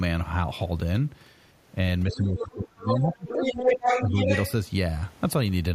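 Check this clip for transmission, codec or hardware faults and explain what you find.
Two echo-cancellation faults are audible, both in the middle of the clip.

Speech suppressed in double talk, 2.07 to 3.57 s: the talker's speech dips by up to around 20 dB for about one and a half seconds. While both ends were talking, the echo canceller likely could not separate local speech from loudspeaker echo, so it attenuated both.

Other side's voice leaking through, at 2.09 to 2.16 s, 2.38 to 2.54 s, 2.83 to 3.08 s and 3.27 to 4.52 s: a second voice comes through, first faint and then at roughly the talker's own level, longest in the last stretch. This is likely far-end playback picked up by the microphone that the canceller failed to remove.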